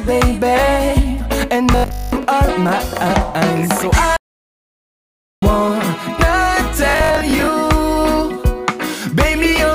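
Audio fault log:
1.72–2.25 s Bluetooth stutter: wireless packets went missing or arrived late, so the receiver kept replaying its last short buffer. Across about 0.53 s, some 386 ms of sound is lost, heard as a buzzing machine-gun repeat with one run lasting 203 ms before playback jumps ahead.
4.17–5.42 s audio dropout to silence: the input feed was likely cut off, through a lost link or a mute, while recording carried on writing silence. The sound stops abruptly into 1.26 s of silence with no room tone, then resumes mid-flow.
6.90–7.47 s Bluetooth stutter: the wireless link again failed to deliver data on time, and the receiver looped its last slice in place of the missing audio. About 264 ms is lost over 0.57 s, as shorter bursts of stutter, the longest 61 ms, before the sound skips forward.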